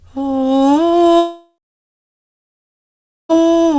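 Likely a long network dropout, 1.18 to 3.36 s: the music's last sound smears into a fading buzz, then silence, before playback resumes past the lost stretch.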